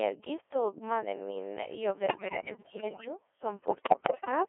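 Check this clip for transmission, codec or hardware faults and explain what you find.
Two problems here, both from a digital voice radio link. The speech is carried by a Codec 2 vocoder throughout, and bit errors hit it twice in the later part.

Codec 2 vocoder, whole clip: only pitch, voicing, energy and spectral shape survive, resynthesised from sine waves inside a 300 Hz to 3.4 kHz band. The result is robotic and buzzy, which fits a 1.6 kbit/s mode.

Bit errors on digital voice radio, 2.06 to 3.08 s and 3.68 to 4.31 s: flipped bits corrupt whole frames, so pitch and level lurch into warbly gibberish. The second burst is worse, roughly one bit in five against one in ten.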